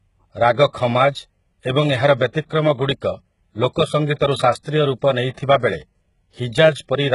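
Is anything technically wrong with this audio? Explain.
Yes. Across the whole speech clip there's heavy damage that sounds like HE-AAC compression, likely from a v2 encode at a very low rate, something like 12 kbps. The codec keeps only the lower spectrum and fakes the treble by copying lower bands upward under a rough envelope, so the top end doesn't line up harmonically with what's below. You hear that as gritty, metallic, lispy sibilants, and nothing at all above about 11.1 kHz.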